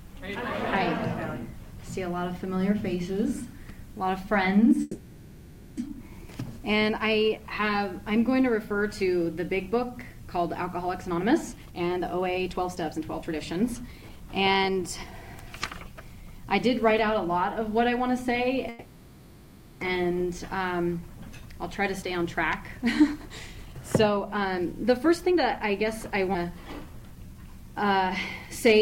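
At 4.81 s the sound stops moving forward and is replaced by a buzzy continuation of its last instant that fades over about 0.96 s, until normal audio resumes at 5.79 s. This call audio freeze was likely caused by packets held up in transit, which emptied the jitter buffer and forced the receiver to extend what it already had. What tells it apart from a dropout is that nothing is lost: the audio picks up exactly where it halted, so a gap has been inserted rather than material cut out.

From 11.05 s to 16.46 s a jitter buffer speed-up runs the audio at about 118% of normal pace while the pitch stays put, leaving it hurried. The receiver was trimming an overfull buffer by removing many tiny pitch-period slices, a second or so in total. Unlike a skip, there is no single audible jump. The compression is spread across five seconds.

A second call audio freeze, again likely from delayed packets, fills 18.69 s to 19.83 s with about 1.12 s of fading buzz before the audio continues intact.

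Another jitter buffer speed-up follows from 22.02 s to 26.28 s at about 114%, shedding roughly 0.7 s in small pieces.

Right after it, at 26.33 to 26.36 s, a skip ahead drops around 0.2 s in one go. The join is nearly seamless, and the material on either side simply abuts. This is a single abrupt discontinuity, not the even rush of a speed-up.

Finally, from 26.59 s to 27.40 s a jitter buffer slow-down stretches the sound to about 90% speed by repeating pitch periods, adding 88 ms to rebuild the buffer. Sounds are drawn out at unchanged pitch. Unlike a freeze, the audio keeps progressing rather than stalling into a fading buzz.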